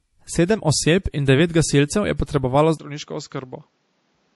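From the start to the end of the speech there is plainly audible MP3 compression, likely encoded at a low bitrate; the sound fits something around 48 kbps. With that few bits the encoder drops weaker spectral components, and they flicker on and off between frames, giving the speech a watery, swirling quality with smeared consonant attacks. The encoder's lowpass also removes everything above 11.5 kHz, so the top octave of sibilance is missing.

At 2.78 s the input switched to a poorer device, likely a different microphone or a headset call profile, and stays there until the end. A gap of about 20 ms marks the changeover. After it the bandwidth narrows to nothing above 7.6 kHz, so the speech turns duller and boxier than the already band-limited MP3 sound. The level drops by roughly 10 dB, and a new background noise appears about 40 dB below the speech.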